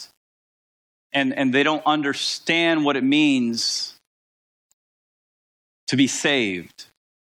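From start to finish the speech is grainy, with grit sitting about 40 dB down; it's likely low bit depth without dither, rounded to something like 8 bits.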